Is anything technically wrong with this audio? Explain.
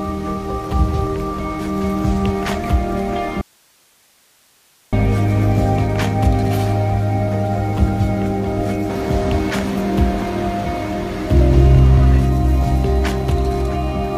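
Yes. From 3.41 s to 4.93 s there is an audio dropout to a faint residue lasting about 1.5 s. The sound cuts off abruptly mid-flow and returns just as suddenly. It is not a fade or a natural pause. The gap holds only hiss, sitting roughly 40 dB below the normal level. The likely cause is the wanted signal being lost upstream while the downstream chain stayed live, so its own noise floor passed through.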